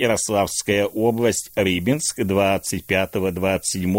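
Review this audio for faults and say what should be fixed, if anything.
Low bit depth with noise shaping runs throughout, fitting 8-bit quantisation. Shaped rounding error forms a thin hiss roughly 20 dB below the speech, brightening toward the top band. On a spectrogram, the noise floor climbs steeply at high frequencies. Keep 16 bits or more through processing and apply dither only at final export.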